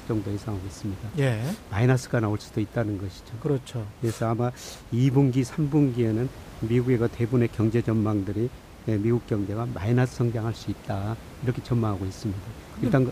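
Speech recording with no technical faults detected; the room noise sits about 19 dB under the voice and belongs to the acoustic environment, not the signal chain.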